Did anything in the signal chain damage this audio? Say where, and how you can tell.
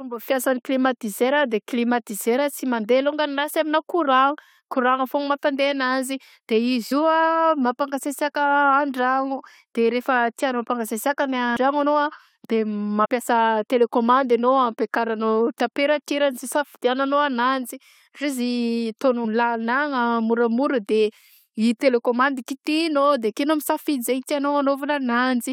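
Yes. Compressed frames were skipped at the codec or storage stage. The speech jumps ahead at 6.91 s (just before "io a"), 11.55 s, 13.04–13.06 s and 19.24 s, losing about 50 or 100 ms each time, which fits two or four missing 23.2 ms frames. Because neighbouring frames overlap, each join is a soft smeared blip rather than a click. On the waveform it shows as an abrupt discontinuity with no click spike, and on the spectrogram as a brief vertical smudge.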